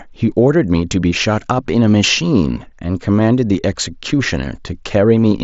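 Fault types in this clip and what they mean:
Concealed Bluetooth headset packet loss: A single voice packet on the wireless link between headset and phone failed to arrive at 3.54 s. The receiver covered the gap by repeating the closest-matching stretch of the preceding waveform. The missing span is only 7.5 ms, which fits one lost frame, so the patch is almost inaudible, set within the band-limited sound of the mSBC headset link.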